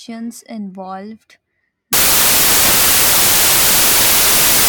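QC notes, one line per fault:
1.93 s to 4.69 s, samples built from the wrong bytes: the speech gives way to loud, harsh broadband noise that runs to the end of the clip. Each sample's bytes are assembled misaligned or in swapped order, so the rapidly changing low bits dominate every value.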